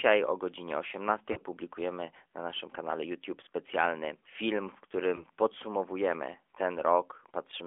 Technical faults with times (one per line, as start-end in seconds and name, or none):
0.00-7.66 AMR narrowband mobile codec
1.32-1.38 lost AMR speech frames
5.16-5.25 lost AMR speech frames